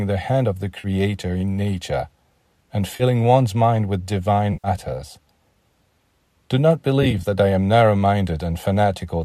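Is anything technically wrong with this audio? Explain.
Yes. AAC frame loss with concealment occurs at 0.80–0.87 s (after "the hand of the"), 2.96–3.03 s (before "one's mind with"), 4.53–4.68 s (after "one's mind with") and 7.03–7.23 s. The decoder patches each missing stretch from the last good spectrum. The result is a brief smeared, phasey patch, longest at about 110 ms. The final event is broken into short dropouts, the longest roughly 20 ms, which fits lost 10 ms low-delay AAC frames.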